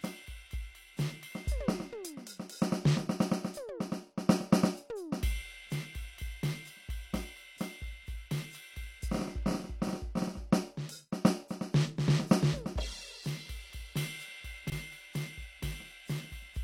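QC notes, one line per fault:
14.64–14.72 s, chunks out of order: a brief jumbled stutter in the music. One 20 ms chunk arrives three chunks late. The three chunks that should follow it play first, and then the late one lands. No audio is missing. The sequence is simply scrambled over about 80 ms. Each join lands at an arbitrary point in the waveform, leaving three hard joins.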